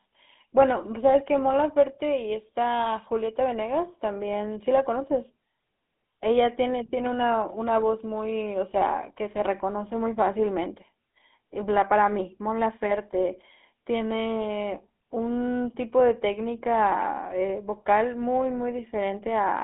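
Across the whole speech clip the sound is buzzy and gravelly, boxed into a narrow telephone band running from about 200 Hz to 3.6 kHz, with nothing at all above 3.8 kHz. That is plainly audible GSM full-rate codec damage, which fits a 13 kbps stream. The codec rebuilds the sound from a vocal-tract model excited by a sparse, regularly spaced pulse train, and that coarse excitation produces the rough, grainy texture.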